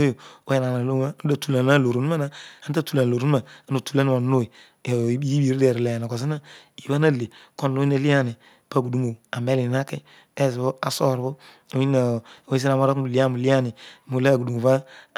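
Listening to the speech here, nothing stood out as a technical fault at any point.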